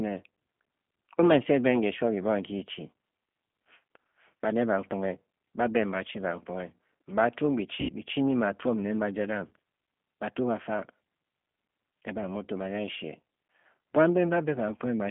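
Throughout, the speech carries G.729 codec damage: at 8 kbit/s the coder rebuilds each 10 ms frame from a vocal tract filter, a pitch predictor and a handful of pulses, so voiced sounds turn rough and slightly synthetic. Content above about 3.4 kHz and below about 150 Hz is gone.

From 7.81 to 7.93 s, VoIP packet loss concealed by the speech codec fills an 80 ms gap, which fits four lost packets. The decoder repeats its last pitch and filter at falling gain, giving a brief buzzy tone or coloured noise that fades. At 9.49 s a single 20 ms loss produces a shorter, similar smear.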